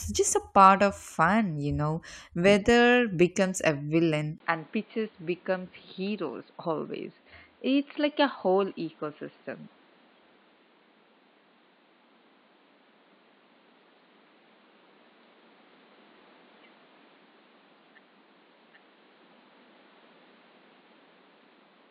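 At 4.38 s the recording likely switches its input to a poorer device, after a 20 ms gap. From there to the end the speech loses everything above 4.7 kHz, turning dull and boxy, drops about 5 dB in level, and carries a new noise floor roughly 30 dB down.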